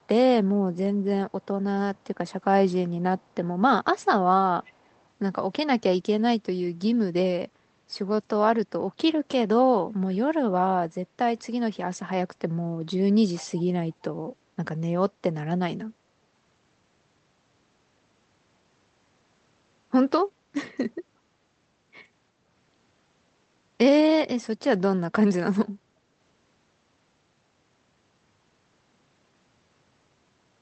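An echo canceller on a loudspeaker end likely failed to remove all that its microphone picked up, so from 4.63 to 5.02 s an echo leak returns the speech 360 ms late, heard as a faint trailing copy roughly 30 dB below it.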